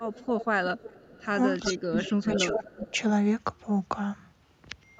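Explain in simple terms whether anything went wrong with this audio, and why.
Echo leak, from 0.0 to 0.45 s, 0.78 to 1.26 s and 1.63 to 2.91 s: a faint, delayed copy of the speech trails the original by about 0.37 s. It is quietest in the second stretch and most noticeable in the third. The likely cause is that someone was on a loudspeaker, and their echo canceller failed to fully remove what its microphone picked back up. The leftover was sent back down the line.

Speech suppressed in double talk, from 1.71 to 2.97 s: the main voice sinks sharply in places, adding up to about 0.7 s of lost or weakened speech. This overlaps the strongest echo, which suggests both sides were talking at once. The echo canceller likely couldn't tell the live talker apart from the loudspeaker's echo, so it turned both down together.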